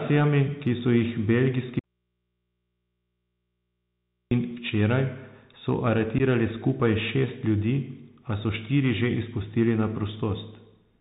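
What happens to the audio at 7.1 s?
At 7.1 s the speech is still passing through the Bluetooth CVSD headset codec that runs throughout: one-bit up-down steps code the signal and nothing above 4 kHz passes, leaving it muffled, with scratchy s sounds and granular hiss.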